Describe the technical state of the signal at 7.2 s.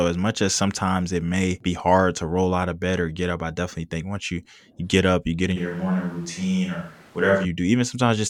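At 7.2 s the speech sounds roomy and hollow, thin in the bass, with background noise roughly 30 dB below it, from 5.58 to 7.43 s after "up you get in". The likely cause is a switch to a distant microphone. Level barely changes, but the spectrogram shows weakened low bands, smeared decay tails and a raised noise floor between syllables.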